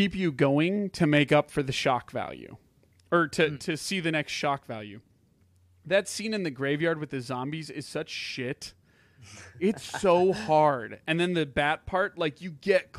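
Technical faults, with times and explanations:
No technical faults are audible in this recording.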